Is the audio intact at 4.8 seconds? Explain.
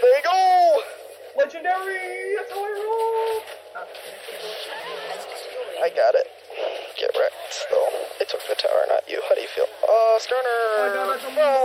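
No. Between 4.68 and 4.84 s the audio has chunks out of order. A 40 ms block of audio reached the output three chunks late, so it plays after the three blocks that should have followed it. Nothing is missing, but the sequence is scrambled and the rearranged pieces meet at three abrupt joins. At 4.8 s this sounds like a brief jumbled moment.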